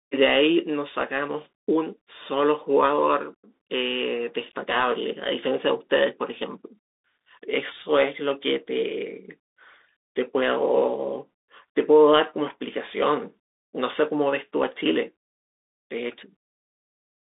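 Speech carried through a Bluetooth CVSD headset codec from start to finish. It sounds boxed into roughly 250 Hz to 3.7 kHz, with nothing above 3.8 kHz, which fits a 64 kbps CVSD link. The one-bit up/down coding leaves a grainy hiss underneath and scratchy s sounds.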